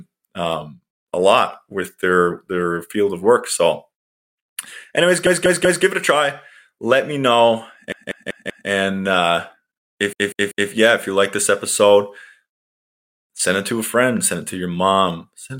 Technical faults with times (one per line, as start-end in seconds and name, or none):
5.26-5.84 repeated frames
7.92-8.69 repeated frames
10.13-10.70 repeated frames